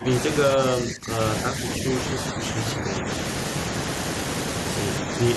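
A speech recording where the talker's level sinks in three stretches: 0 to 0.27 s and 0.55 to 1.19 s, dipping by roughly 15 dB, then 1.79 to 3.09 s, where the dip is shallower at around 5 dB. This is likely speech suppressed in double talk, an echo canceller turning the talker down while the far side speaks. Unlike a gate or packet loss, the level is pulled down in uneven pieces rather than snapping cleanly to silence.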